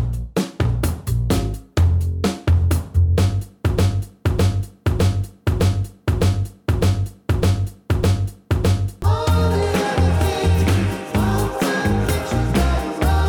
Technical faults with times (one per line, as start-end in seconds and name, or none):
3.78-9.02 broken-record loop